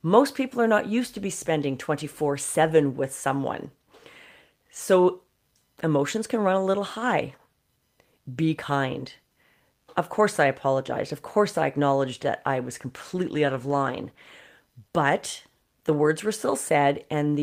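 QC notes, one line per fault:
12.62–14.47 s, call bitrate drop: right after "I acknowledged that I", the speech turns rough and watery, with a smeared texture that lasts about 1.8 s before clarity returns. The call's bandwidth estimate fell, so the encoder was given far fewer bits and coded the speech more coarsely until the rate recovered. The degree of roughness fits a drop from around 32 kbps to about 18 kbps.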